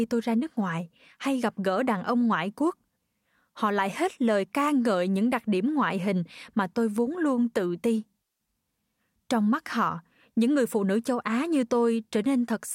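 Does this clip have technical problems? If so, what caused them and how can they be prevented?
No, there are no technical problems to point to in this speech clip. With no fault present, there is no cause to explain and nothing that needs preventing.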